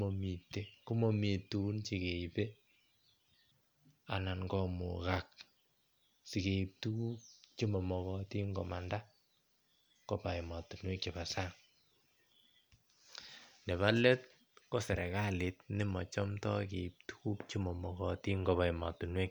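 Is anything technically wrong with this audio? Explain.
No, nothing technically wrong is audible in this speech recording.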